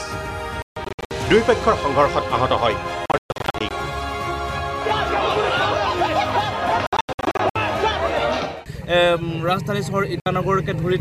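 Between 0.62 and 1.11 s, 3.06 and 3.71 s, 6.87 and 7.56 s, and briefly at 10.20 to 10.26 s, the sound cuts to silence in abrupt gaps of up to 140 ms, resuming further on as though it had kept playing. This is a Bluetooth dropout, likely caused by late packets being discarded.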